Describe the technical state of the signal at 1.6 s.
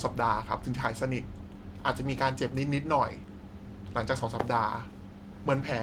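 At 1.6 s the signal is intact, with the light Opus voice compression in hybrid mode at 24 kbps and full bandwidth coming through without any fault.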